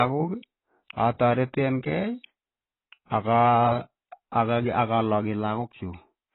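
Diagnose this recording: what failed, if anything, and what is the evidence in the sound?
AAC compression, heard throughout the clip, is a codec-stage fault. The speech stops dead at about 3.9 kHz, so sibilants lose their edge and the whole voice sounds dull, while sustained vowels carry a heavy warbling, smeared texture. The likely cause is an AAC-LC encoder starved of bits, which fits a rate around 16 kbps. It discards the upper band entirely and quantises the remaining spectrum so coarsely that gaps and artefacts become audible.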